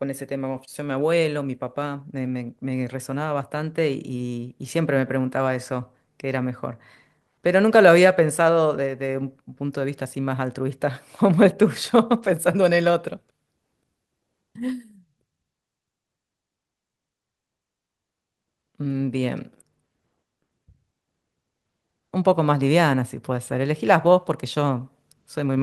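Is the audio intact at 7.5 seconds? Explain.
No. The sender's clock runs roughly 4 percent faster than the receiver's, so this clock drift between sender and receiver keeps the jitter buffer filling throughout the clip. At 7.5 seconds the audio falls within that drift rather than a clean, continuous flow.

The receiver answers with repeated timing corrections from 0.02 s to 25.49 s, trimming short pieces to keep pace with the 104 percent rate. These small cuts fall unevenly and all in one direction, heard, if at all, as faint hiccups or a wobbling tempo around 7.5 seconds.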